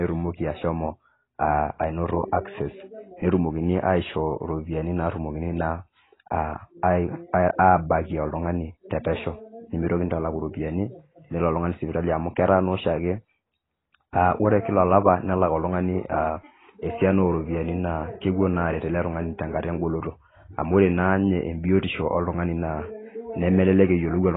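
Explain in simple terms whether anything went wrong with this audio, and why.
The speech sounds dull and muffled from start to finish, with nothing above about 3.9 kHz and a smeared, fizzy edge on hissy sounds. That's the mark of heavy AAC compression, which likely squeezed the file so hard it threw away the treble.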